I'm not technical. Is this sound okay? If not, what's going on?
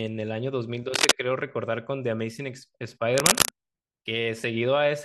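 No. A worn cable or plug was likely being moved, so its electrical contact kept flickering. That produces cable scratch noise: short bursts of scratchy rustling, louder than the speech itself, from 0.94 to 1.11 seconds and again from 3.15 to 3.49 seconds.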